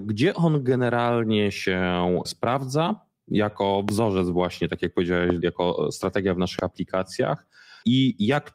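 Three loud pops hit the speech: at 3.89–3.91 s before "właśnie tak jak", at 5.30–5.32 s before "jako strategia w", and a softer one at 6.59–6.61 s after it. Each is a single sharp crack well above the talker, likely a brief voltage spike, with the speech running on underneath.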